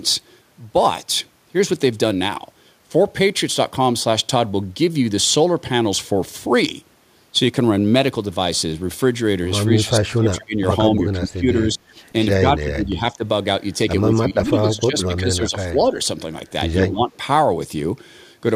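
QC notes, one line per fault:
9.65–10.56 s, 10.97–11.93 s, 12.39–13.24 s, 14.06–15.96 s, 16.8–17.08 s: speech suppressed in double talk. The echo canceller likely mistook overlapping talk for echo, so the speech dips by about 25, 20, 15, 15 and 10 dB.
15.02–15.06 s: echo leak. Residual loudspeaker pickup, likely missed by the far-end canceller, returns as a brief copy delayed 161 ms, about 25 dB below the speech.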